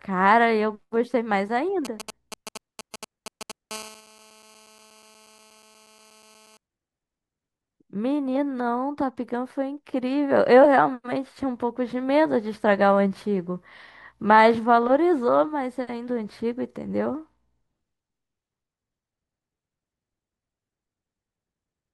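From 1.85 to 3.52 s, GSM signalling bursts from a nearby 2G phone are rectified by the audio circuit, giving galloping ticks and short 217 Hz buzzes roughly 10 dB below the speech. From 3.71 to 6.57 s, GSM phone buzz follows as the handset holds a call: a steady, raspy 217 Hz buzz rich in harmonics, about 25 dB below the speech.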